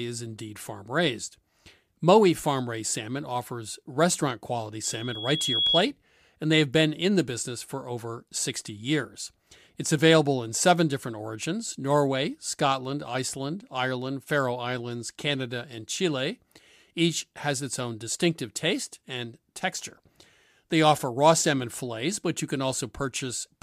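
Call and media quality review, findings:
Loudspeaker feedback squeal, 4.84–5.91 s. Mic picking up its own loudspeaker; loop gain above one at 3.3 kHz. Single tone swells over under a second to a few dB above the speech, then cuts off.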